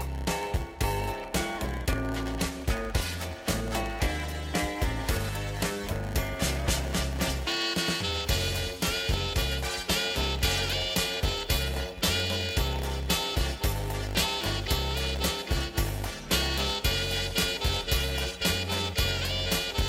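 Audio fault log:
Throughout, block size mismatch (padded): one stage delivers shorter blocks than the next reads, so a short zero-filled gap ends every block. That gap repeats 100 times per second, heard as a 100 Hz buzz, and the sound runs slow at 0.919 times normal speed.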